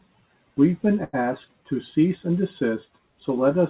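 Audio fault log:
1.04–1.15 s, short stall from a late packet: the speech hangs on one sound for about 91 ms with a slight buzz or dip, then picks up exactly where it stopped, with nothing lost. A packet arrived late, so the receiver stretched the last audio to bridge the gap.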